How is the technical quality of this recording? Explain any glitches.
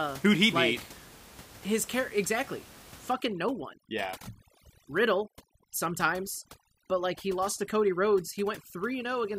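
The recording has one clear processing fault over roughly its last two-thirds, with room noise sitting about 21 dB below the speech.

Overdone noise removal runs from 3.13 s, right after "care exactly", through to the end of the clip. A noise reduction stage set far too aggressively pushes individual frequency bands down or off whenever their level drops near its noise estimate, and the softer parts of the voice get cut along with the room noise. The background drops and breaks up into twinkling, warbling specks.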